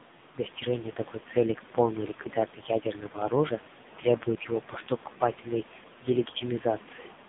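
From start to finish the speech carries the sound of the AMR narrowband mobile codec, the AMR-NB coder used on 2G and 3G calls. The band is squeezed to roughly 150 Hz to 3.7 kHz, with nothing above 3.8 kHz, so sibilants and consonant detail are gone. Damage is heavy: the voice is rebuilt from a vocal-tract model excited by sparse pulses, giving a buzzy, synthetic texture that points to one of the codec's lowest rates, around 5.9 kbps.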